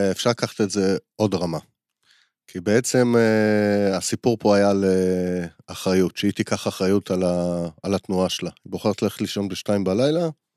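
Nothing in the recording stood out as a technical problem on listening.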